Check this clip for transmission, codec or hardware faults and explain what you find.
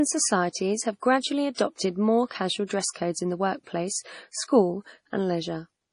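Two codec faults are audible in this speech.

Throughout, the sound is watery and swirly with nothing above 10.6 kHz, likely from heavy MP3 compression at a low bitrate, near 32 kbps, that starves and flickers weak frequency lines; a spectrogram shows a hard ceiling and patchy upper bands.

Pre-echo runs from 1.54 to 1.58 s: codec noise spreads about 40 ms ahead of an attack, heard as brief hiss before a softened onset, and seen as a smear before the waveform's rise.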